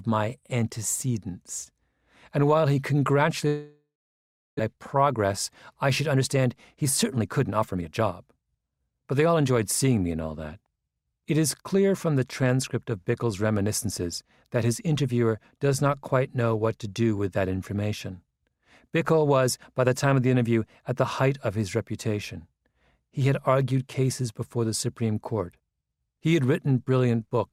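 From 3.47 to 4.61 s the sound cuts out, likely a long network dropout. A fading buzz gives way to about 0.71 s of silence, and roughly 0.6 s never returns. Then comes a jitter buffer speed-up. The receiver trims tiny pitch-period slices to shed the built-up delay. From 4.76 to 5.25 s it runs 6% fast. From 5.85 to 9.37 s it runs 13% fast, hurried but at unchanged pitch, dropping about half a second.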